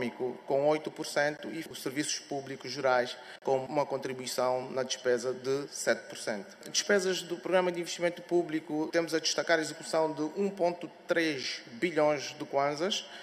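At 1.37 s there's a quick hard-edged dropout, about 17 ms, then another at 3.39 to 3.42 s lasting about 33 ms, and a tiny one at 11.43 s, around 7 ms. Each is a gap between stream segments: the timestamps of neighbouring chunks don't quite line up, so the player pads the hole with silence. Nothing is lost, and the clip just runs slightly longer. The spacing between the gaps fits 2-second segments.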